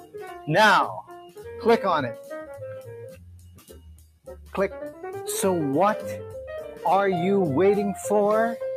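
Right through the clip a noise suppressor applied to music or sounds is still switched on. It was built for speech, so it mistakes steady tones, ambience and decay for noise and keeps turning them down, and the level swings by around 10 dB as it reacts.

The sound gets cut by the noise suppressor three times. From 0.0 to 0.49 s it drops by about 13 dB, and from 1.02 to 1.46 s by about 14 dB. The longest cut runs from 3.03 to 4.54 s, roughly a second and a half, reaching about 19 dB down, with the sustained parts sinking.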